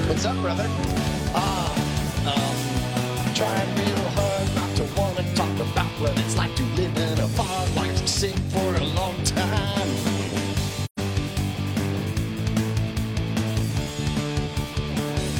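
At 10.84 s the sound drops into a short hole. It lasts until about 10.99 s, roughly 0.15 s. This is AAC frame loss with muting. Several coded frames never reached the decoder, and it filled their spectrum with zeros. The gap fits about three frames. The edges are soft, not abrupt. Because each frame's window overlaps its neighbours, the sound fades out going into the gap and fades back in after it.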